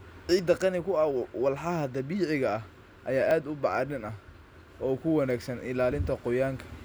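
A recording of speech with three abrupt jumps in the sound at 0.39 s, 3.31 s and 5.92 s. These are likely dropped buffers (overrun): samples went uncollected and were overwritten, removing roughly 20 to 30 ms each time and splicing both sides together.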